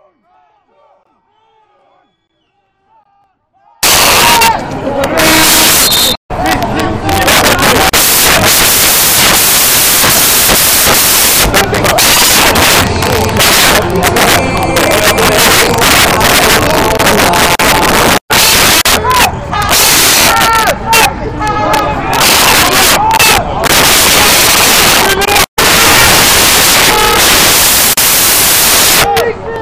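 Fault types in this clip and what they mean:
Samples built from the wrong bytes: from 3.83 s to the end, the sound collapses into loud, harsh broadband noise, because each sample's bytes are assembled misaligned or swapped, so the rapidly changing low bits become each value's dominant part.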